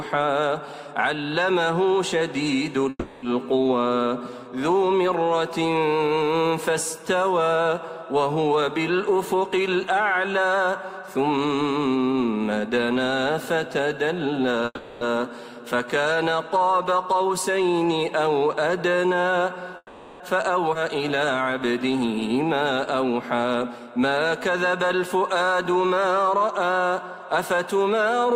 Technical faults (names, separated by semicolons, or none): call audio freeze; jitter buffer speed-up; skip ahead